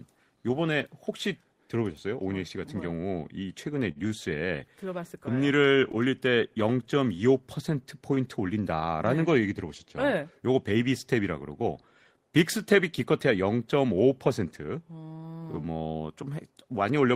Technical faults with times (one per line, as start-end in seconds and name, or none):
3.91-4.13 short stall from a late packet